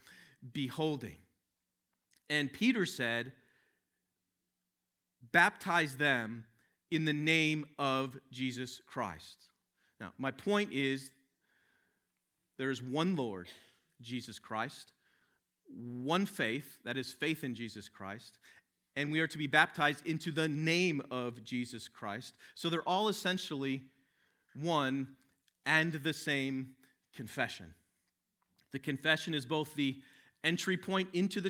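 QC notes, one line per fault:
No fault to note.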